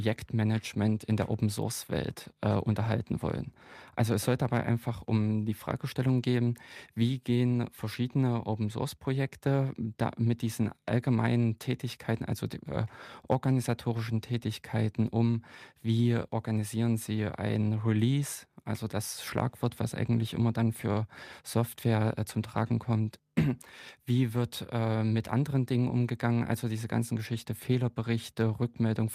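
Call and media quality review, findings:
Nothing to flag on this speech recording; it all sounds fine from beginning to end.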